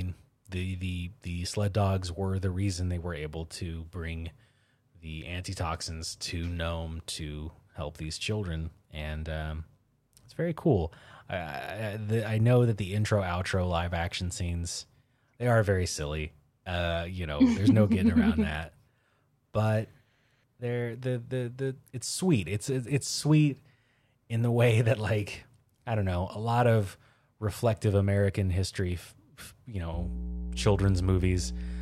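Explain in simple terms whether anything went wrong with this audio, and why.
A loud, steady low buzz comes in at 29.94 seconds and lasts to the end at 31.81 seconds, almost as strong as the speech. This is mains hum: the 60 Hz electrical supply leaking into the recording, likely through a ground loop or a nearby transformer.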